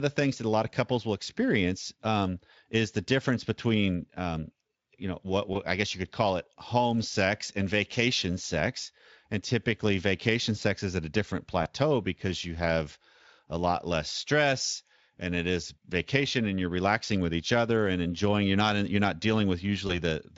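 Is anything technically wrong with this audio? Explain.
Yes. There is VoIP packet loss concealed by the speech codec at 5.53 to 5.56 s (between "um you know what" and "I guess you could"), at 11.63 to 11.66 s (between "is at a different" and "because you have a"), and at 19.87 to 20.02 s. In each case a 20 ms packet went missing, and the Speex decoder, which otherwise adds only light coding roughness, filled the gap by repeating its last pitch and filter at falling gain. The result is a brief stretched, fading smear. On a spectrogram this looks like flattened, repeated harmonics followed by a dip in energy. On a waveform it appears as a short stretch of near-periodic, decaying cycles. The last event lingers longer, at about 150 ms.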